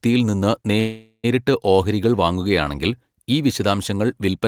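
At 0.79 s the speech stops and a call audio freeze runs until 1.26 s. The last sound is stretched into a buzzy hiss that decays over roughly 440 ms, ending in about 50 ms of silence before the speech resumes. Nothing is lost. The speech continues exactly where it broke off, now about 440 ms late. This is likely a jitter buffer running dry while packets were delayed in transit, with the receiver filling the wait with concealment.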